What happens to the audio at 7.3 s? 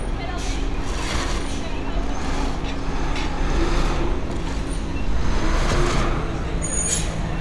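Nothing goes wrong at 7.3 s; the sound plays through that moment intact, with no dropout, click or distortion.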